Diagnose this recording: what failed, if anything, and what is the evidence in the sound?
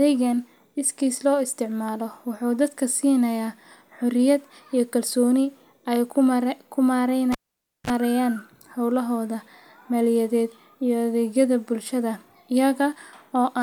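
Analogue wiring: a cable was pulled and plugged in at 7.32–7.90 s. The waveform pops, flatlines for 530 ms, shows a 33 ms 50 Hz buzz (spectrogram harmonic stripes) as the tip touches, then pops back.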